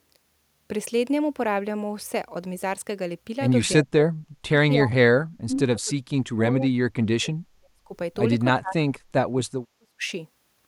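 Speech clip where the talker keeps getting pushed way down, at 3.84–4.59 s, 4.76–5.12 s, 5.28–7.91 s and 8.55–10.11 s, by roughly 40 dB at worst. That's likely speech suppressed in double talk, with the echo canceller ducking this side while the far end talked.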